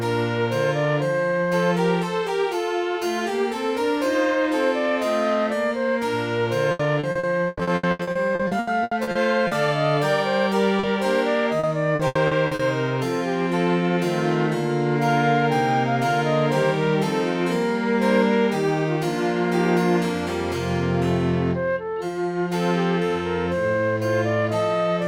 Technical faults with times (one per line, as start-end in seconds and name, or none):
6.71-9.54 repeated packet loss (robotic sound)
10.79-10.86 short concealed packet loss
11.59-12.62 repeated packet loss (robotic sound)